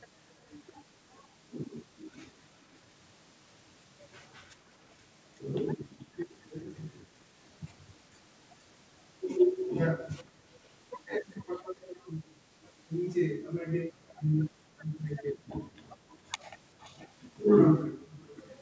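Echo leak runs through the speech at 0.48–0.52, 1.66–2.76, 5.89–7.48, 10.02–12.66, 14.08–15.0, 16.09–17.08 and 18.22–18.5 s. A faint delayed copy of the voice trails it, slipping from 422 to 459 ms behind and sitting roughly 20 to 40 dB below the speech. The likely cause is a far-end loudspeaker whose echo canceller failed to scrub what its microphone caught, sending that residue back.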